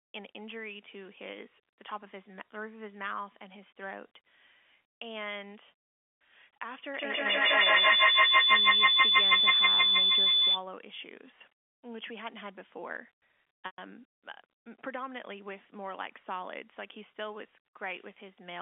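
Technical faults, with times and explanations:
6.94–10.64 s, feedback howl: A tone builds to a peak about 21 dB above the speech and settles on a single pitch near 4 kHz. It pulses at a repeat of roughly 150 ms, the round-trip delay of a microphone-to-loudspeaker loop that gains level on each pass. Unlike an echo, whose repeats fade and keep the sound's full character, these repeats grow louder and narrow to the one frequency the loop favours. The howl lasts until the loop breaks.
13.66–13.78 s, packet loss with pitch repetition: A 120 ms gap, which fits about six 20 ms packets going missing, is bridged by repeating the last pitch period. This gives a brief held, buzzy sound that fades into silence, and the signal then returns through a short cross-fade. A codec dropout would be an abrupt hole. Here the gap starts with a smooth, buzzy sustain before going quiet. The narrow 250–3400 Hz telephone band of the G.711 line is audible on both sides of the gap.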